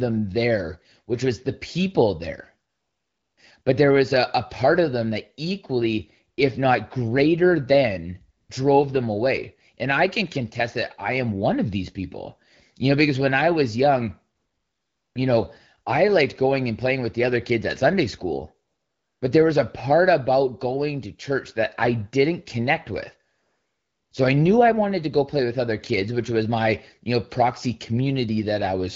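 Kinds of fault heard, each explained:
AMR comfort noise: In pauses the phone stops sending speech and the receiver fills in synthetic noise. Here the real background switches to a smooth, steady hiss six times, as after "was the people there" and "I didn't connect with", lasting up to 0.8 s.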